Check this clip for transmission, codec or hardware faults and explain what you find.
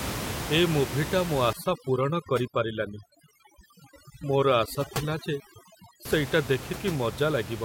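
One processing fault stands out: overdone noise removal from 1.53 to 6.05 s. A noise suppressor set far too strong shuts down individual frequency bands whenever they sit near its noise estimate, and it strips out quieter speech detail along with them. The room noise, about 10 dB below the speech, drops and breaks up into twinkling specks.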